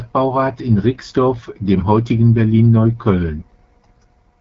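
AMR wideband (HD Voice) codec damage runs through the whole of this speech recording. The speech has a plainly audible rough, raspy texture, which fits one of the codec's two lowest rates, around 8.85 kbit/s. The codec leaves nothing above 7.6 kHz.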